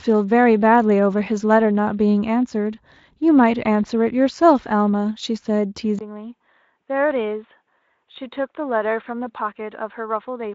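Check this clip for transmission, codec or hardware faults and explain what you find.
One fault stands out in this speech. From 5.99 s to the end, the sound turns duller and boxier, probably an input switched to a poorer device (the likely cause). After a 20 ms silence, the band stops at 3.8 kHz instead of reaching 7.6 kHz as the Speex stream did before. The level drops by roughly 10 dB, and a new faint noise floor appears about 50 dB down. A spectrogram shows the upper band vanishing at the switch. The waveform shows a brief gap, then a smaller envelope.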